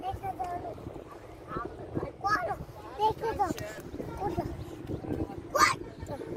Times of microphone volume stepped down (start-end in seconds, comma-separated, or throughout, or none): none